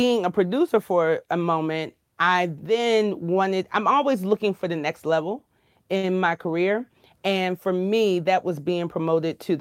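A speech clip with one short stall from a late packet, starting at 5.97 s right after "for the next level" and running to about 6.05 s. The packet didn't show up on time, so the jitter buffer ran dry and the receiver padded out the last sound for 57 ms while it waited. Nothing was lost, since playback picks up exactly where it left off, but that sound hangs on a touch too long and everything after it arrives 57 ms later.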